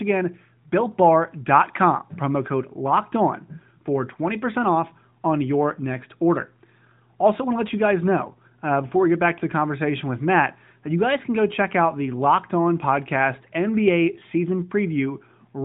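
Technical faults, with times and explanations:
No technical faults can be heard in this speech recording.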